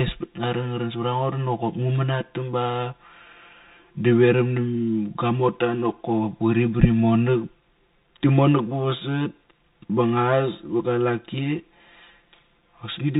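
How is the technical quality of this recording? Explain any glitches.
The recording is poor, with two faults present from start to finish.

Channel delay (comb filtering) runs throughout. One channel arrives around 5 ms late, and summing to mono cancels shared content at evenly spaced frequencies, with the first notch near 100 Hz. The speech therefore sounds hollow and phasey.

A Bluetooth CVSD headset codec affects the whole clip, and the damage is plainly audible. The sound fits a 64 kbit/s CVSD link, where each sample is a single up-or-down bit with an adapting step size. Nothing above 4 kHz survives, s sounds turn scratchy, loud high passages distort, and a granular hiss sits underneath.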